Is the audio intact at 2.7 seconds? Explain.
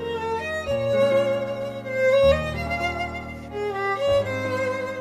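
Yes, at 2.7 seconds the audio runs intact, with no dropout, click, distortion or other fault heard at that point.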